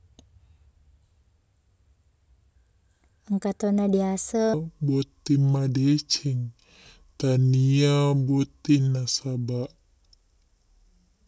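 At 4.54 s the speech drops into a wrong sample rate fault that lasts to the end. The samples are being clocked out more slowly than they were captured, with no conversion. Everything runs at two-thirds speed. Pitch falls about 7 semitones, a ratio that fits 24 kHz audio played at 16 kHz. The voice turns deep, heavy and dragging. Syllables stretch out, and the pacing sounds sluggish and unnatural.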